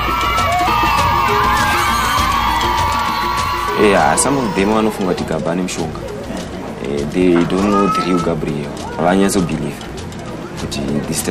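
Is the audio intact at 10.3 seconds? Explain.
No. At 10.3 s, as throughout, a filter restarted on every block resets its state, leaving a 43.1 Hz buzz that fits 1024-sample blocks.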